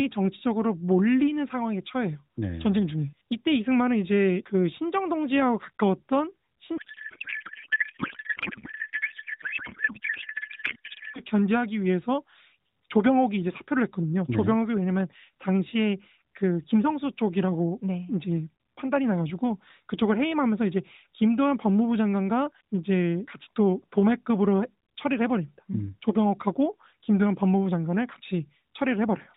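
From 6.78 s to 11.20 s the speech is replaced by garbled noise and warble that barely tracks it, a codec payload misread. The stream points to octet-aligned AMR being unpacked as bandwidth-efficient, so the decoder accepts plausible frames but pulls every field from the wrong bit positions. The AMR narrowband path itself, with nothing above 4 kHz and light coding texture consistent with the 12.2 kbps mode, is heard again once packing agrees.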